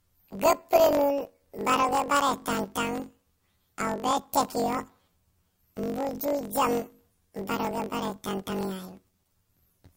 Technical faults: planar audio read as interleaved

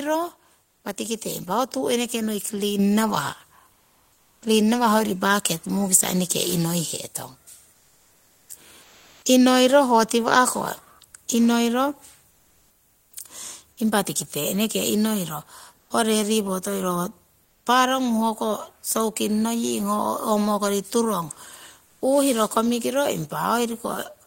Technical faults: microphone volume stepped up; comfort noise in place of the background; onset clipped by the voice detector; sound dropped by the voice detector

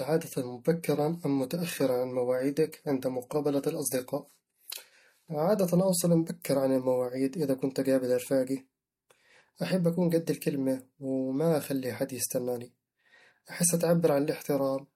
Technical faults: adaptive stream starting at a low bitrate

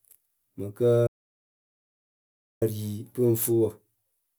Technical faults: audio dropout to silence

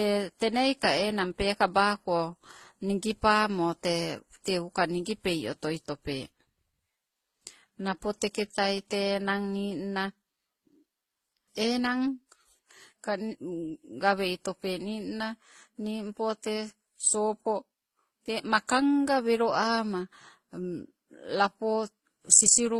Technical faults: transcoding between lossy codecs

